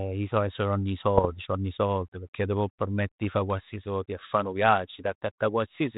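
From 1.17 to 1.29 s, just before "sord pecchè t' può", the sound breaks into pops and a rough, gritty burst with brief jumps in level. These are bit errors on an ADPCM link, here the 32 kbit/s G.726 path. At an error rate of roughly a few tenths of a percent, each flipped bit throws off the decoder's step size and prediction, so the damage rings on for milliseconds.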